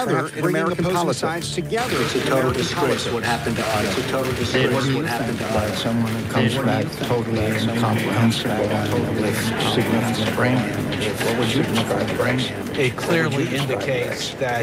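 A second, slower capture path likely doubles this audio: a dry copy about 5 dB quieter trails roughly two seconds behind throughout, a doubled audio track.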